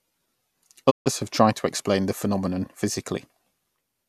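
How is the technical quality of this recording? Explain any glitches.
There is one glitch, a digital broadcast dropout from 0.89 to 1.08 s. The receiver lost valid frames and muted, fading out over 20 ms. About 144 ms of speech is missing before "have tried to explain" returns.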